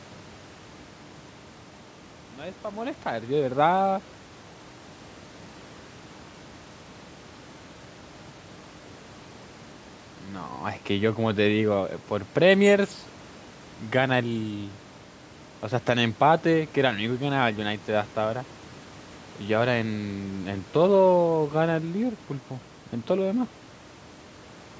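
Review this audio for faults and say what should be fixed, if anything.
Nothing stood out on listening that needs fixing; the gentle fade-in over the first 3.6 s and the faint room noise sitting about 26 dB below the speech are both just part of the recording.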